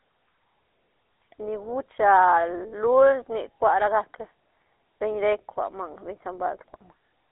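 Speech passed throughout through the GSM full-rate codec, which fits a 13 kbps stream: the vocal tract is modelled and driven by regularly spaced pulses. This leaves a plainly audible buzzy, gravelly roughness, a 300 Hz to 3.4 kHz telephone band, and nothing above 3.8 kHz.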